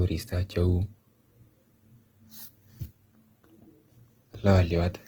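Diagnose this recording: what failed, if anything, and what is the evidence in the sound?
Throughout the speech, the sound is grainy and rough, with a noisy, hashy texture in place of clean harmonics, yet the top end still reaches about 20.1 kHz. That is likely Opus compression in its CELT mode, at a rate that fits roughly 16 kbps, with starved bands filled by folding or noise.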